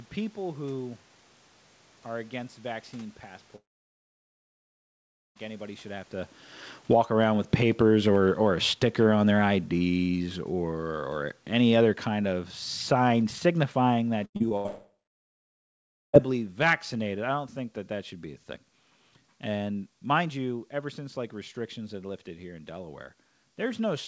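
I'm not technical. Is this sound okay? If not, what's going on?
No, there are a few problems here.

The biggest is a long network dropout, twice. The first comes right after "are against vaccine" at about 3.56 s. The sound trails off into a short buzzy smear and then goes almost silent until about 5.37 s, when it picks up at "anybody should have to." Roughly 1.8 seconds of speech is simply gone, not delayed. The second dropout runs from about 14.66 s to 16.27 s. Around 1.5 seconds is lost there, and most of that stretch is plain silence. The likely cause is the connection stalling completely, so the call app just filled the hole with a fading echo of the last sound.

Just before that second dropout, from about 14.25 s to 14.66 s, there's repeated packet loss (robotic sound). In under half a second the audio breaks up four times, with the longest gap about 90 ms. About half that stretch is patched-over filler rather than real speech, which gives it a choppy quality.

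You'll also hear the automatic gain falling. From "anybody should have to" at about 6.76 s through to "think that that should" at about 17.52 s, the volume control keeps turning things down, so the voice and the background sink together quite a lot over those ten seconds.

Inside that stretch there's a brief case of automatic gain rising, from about 7.09 s to 9.44 s. The level swells back up a little before the downward slide carries on. The talker also shifts position around 6 s, which changes the loudness, but that's just them moving and not a fault.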